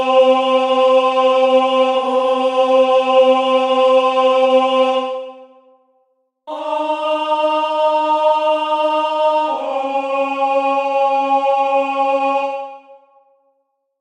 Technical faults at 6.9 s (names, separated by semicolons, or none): none